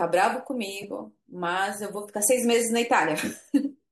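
At 0.82 s, running to 0.84 s, there's a corrupt frame decoded: a single compressed frame had some of its bits flipped, and the decoder played it anyway. With gains or spectral codes misread, energy lands in the wrong frequency regions for the span of that one frame, so you hear a short, unnatural blip or squeak cutting into the speech. It peaks around -25 dBFS.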